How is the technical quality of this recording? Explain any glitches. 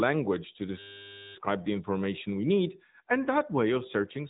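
The recording has two clear faults: narrowband mobile-codec coding throughout, and a short system hang loop near the start.

AMR narrowband mobile codec, throughout: The speech was carried through an AMR-NB mobile codec, which samples at 8 kHz and rebuilds the voice from a vocal-tract model excited by a handful of pulses per sub-frame. Nothing above about 3.8 kHz survives, so the speech sounds muffled and telephone-like. The coding damage is plainly audible as a buzzy, synthetic edge, which fits a mid-range bitrate around 10 kbps.

System hang loop, 0.79 to 1.35 s: The system stalled while the audio hardware kept replaying the same 10 ms stretch of its buffer, over and over for about 0.56 s. Because the loop is so short, it repeats 100 times a second and comes across as a steady 100 Hz buzz rather than a stutter. Normal speech resumes with "the information we need", and essentially no audio appears to have been skipped.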